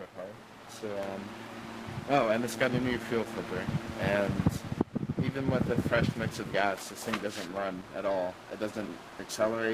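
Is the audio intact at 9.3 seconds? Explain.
No, not really. At 9.3 seconds you're still hearing the periodic clock jitter that runs through the whole clip. Something is wobbling the converter's sample clock at around 1 kHz, so every component of the sound picks up sidebands roughly 1 kHz above and below it, and higher-pitched material gets hit hardest. It comes across as a gritty, metallic edge riding on the sound, and it drops away whenever things go quiet.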